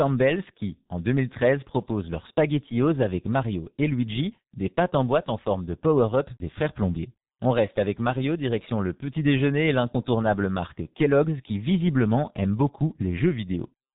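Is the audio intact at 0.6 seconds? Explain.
No. At 0.6 seconds, as across the whole clip, the speech carries G.723.1 codec damage. Nothing passes above 3.8 kHz, so it sounds muffled. The heavy, hoarse coarseness and blurred consonants fit a bitrate near 6 kbit/s and 30 ms frames.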